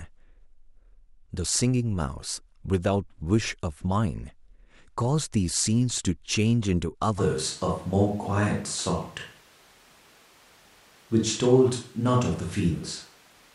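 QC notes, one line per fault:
7.2 s to end, switch to a distant microphone: speech abruptly turns roomy, hollow and thin, level barely changes, room noise about 30 dB below; likely the close microphone dropped out.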